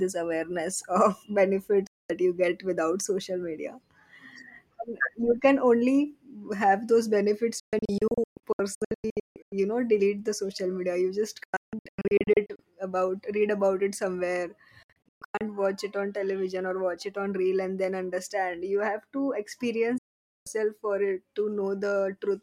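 Speech with five digital broadcast dropouts: at 1.87 s before "you get without social", after "only have those benefits" around 7.6 to 9.5 s, after "social media you just" at 11.4 to 12.6 s, then 14.8 to 15.4 s and 20.0 to 20.5 s. The receiver lost frames and muted with a quick 3 ms fade, often in scattered short holes.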